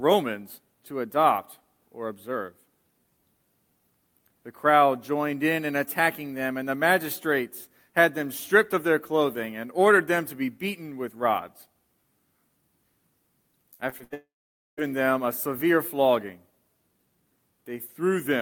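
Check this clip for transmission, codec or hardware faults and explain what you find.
Two transmission faults occur back to back near the end.

From 13.73 to 14.14 s there is repeated packet loss, with a robotic sound. Four gaps were patched by extending earlier sound, the longest about 81 ms. Nearly half that stretch is filled-in audio, so it sounds choppy.

From 14.14 to 14.79 s the sound stretches into a fading buzz or hiss, then drops to silence for half a second. A long network dropout is the likely cause. The audio resumes afterward with that part missing.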